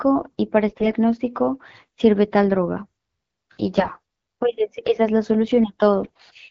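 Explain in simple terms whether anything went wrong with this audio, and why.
Three short patches of AMR bit errors, at 0.68 to 0.87 s, 3.76 to 4.00 s and 6.01 to 6.30 s. The HD Voice codec carrying the speech arrived with some fine detail scrambled, so the voice keeps its pitch and loudness but briefly turns hoarse and gargly.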